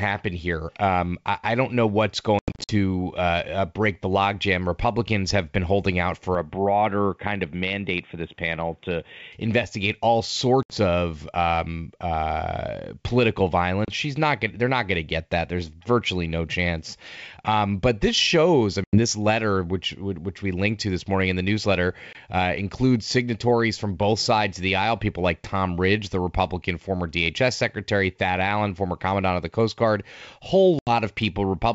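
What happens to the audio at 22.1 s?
At 22.13 to 22.16 s there is packet loss on an ADPCM call: about 20 ms of audio, roughly a couple of packets, drops out and is filled with silence, leaving a hole with abrupt edges. The G.722 stream, at 64 kbit/s, codes each sample as a difference from a prediction, so when sound resumes the receiver's predictor and step size no longer match the sender's. Unlike a clean dropout, the restart is rough, with a click, a level jump or brief distortion that settles over the next few tens of milliseconds.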